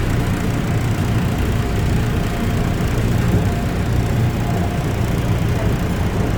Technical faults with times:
0.00-6.38 generation loss

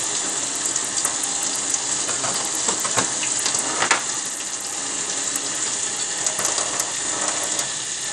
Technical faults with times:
0.00-8.12 Bluetooth SBC compression

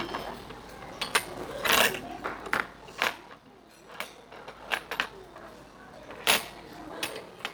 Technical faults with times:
0.00-7.54 block size mismatch (padded)

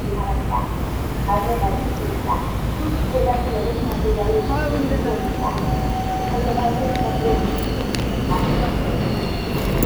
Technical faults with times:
0.00-9.85 low bit depth without dither

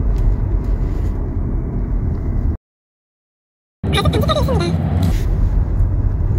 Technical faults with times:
2.56-3.84 playback stall
3.84-5.11 catch-up at higher speed

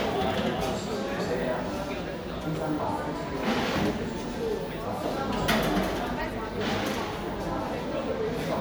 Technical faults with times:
3.25-3.27 corrupt frame decoded
6.21-6.24 corrupt frame decoded

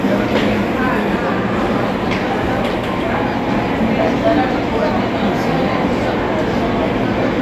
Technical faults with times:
none

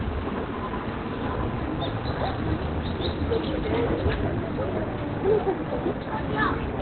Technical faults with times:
0.00-6.81 Opus compression

